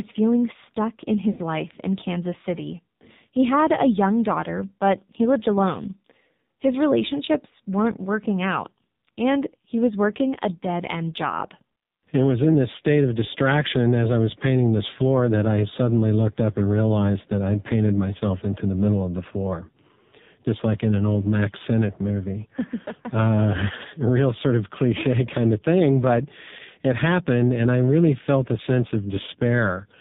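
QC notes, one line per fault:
Throughout: AMR narrowband mobile codec. Heavy coding damage at about 5.9 kbps, band-limited below 4 kHz, so the voice comes across buzzy, thin and fairly synthetic.
1.32–1.41 s: lost AMR speech frames. Between "feeling stuck in" and "life in", about 60 ms gets smeared and fades as the decoder reuses old settings, which fits three dropped frames.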